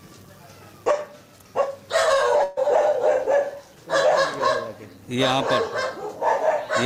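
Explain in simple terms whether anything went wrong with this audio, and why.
A burst of packet loss hits at 2.43 to 2.59 s: about 140 ms went missing, so the last sound is stretched and faded to cover it before the audio resumes.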